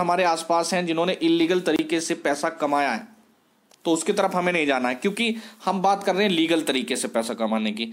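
From 1.76 to 1.79 s there is a gap at a join of encoded pieces: about 28 ms of silence where separately encoded segments meet with their encoder delay and end padding left in. Unlike a dropout, nothing is missing; the sound resumes exactly where it stopped, with softened edges.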